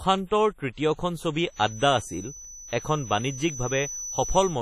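A speech recording carrying heavy codec damage from start to finish: the sound has a ringing, washy quality with a hiss that rises and falls along with the speech, and nothing is present above 15.6 kHz. This is likely WMA compression, where long transform blocks smear quantisation noise over tens of milliseconds and weak spectral lines are dropped to zero. The degree of damage fits a low bitrate, around 32 kbps. From 1.46 s until the end of the clip a feedback whistle sits behind the speech as a thin tone at a single pitch of 6 kHz that slowly swells and fades, roughly 15 dB below the speech level. The cause is likely a loudspeaker-to-microphone path running just short of the point of runaway feedback, so a single frequency keeps ringing at low level without growing into a howl.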